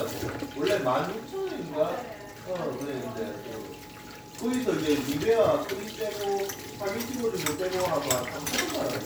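Listening through, nothing stands out as a technical fault.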